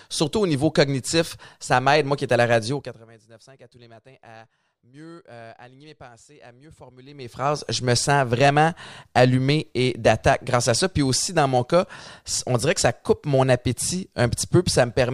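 From 2.69 to 3.07 s a fast ticking rides on the speech as it drops by about 25 dB, and from 7.01 to 7.52 s the same zipping returns as the level climbs back by a similar amount. This is zipper noise: each fade is applied in unsmoothed 2 dB jumps, around fifty per second going down and thirty per second coming up, and every jump leaves a small click.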